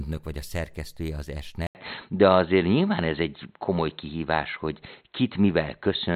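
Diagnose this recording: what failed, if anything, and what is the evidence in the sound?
At 1.67 s, right after "vagy a szerkesztője az", the speech drops out for about 80 ms and comes back dull, with nothing above 4.2 kHz, a level shift of a few dB and a new, faint noise floor. That's likely an input switched to a poorer device at the driver level.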